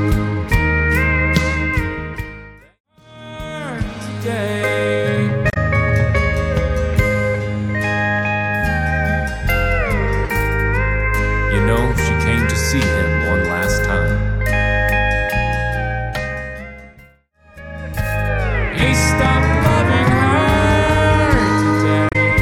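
Damaged data in a compressed stream appears at 5.50 to 5.57 s and again at 22.09 to 22.16 s. Corrupted bytes make the decoder misread those frames and lose sync until it finds the next valid frame header, producing a short chirp, squawk, click or hole each time.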